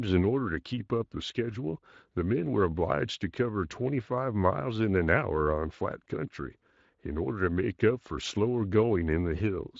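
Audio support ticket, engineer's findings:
Nothing to chase on this one: the speech comes through the Speex path with only light, expected coding texture, and no dropouts, glitches or other faults turned up anywhere in the clip.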